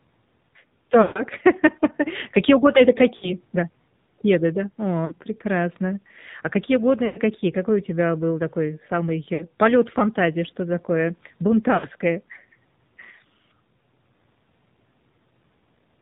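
Throughout, the speech sounds buzzy, synthetic and capped below 4 kHz: the AMR narrowband mobile codec at a low bitrate, which fits roughly 7.4 kbps. Brief warbles and drawn-out fades come at 1.02–1.23, 3.16–3.32, 5.06–5.14, 7.06–7.20, 9.34–9.45 (between "тебя был такой самый" and "полёт фантазии") and 11.74–11.87 s. These are lost AMR speech frames, 40 to 140 ms each, where the decoder repeats the last good settings with decaying gain.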